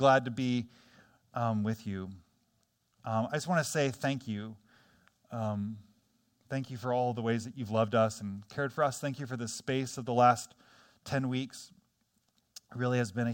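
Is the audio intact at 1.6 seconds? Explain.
Yes, the speech at 1.6 seconds plays through cleanly, with no dropout, click, distortion or other fault at that moment.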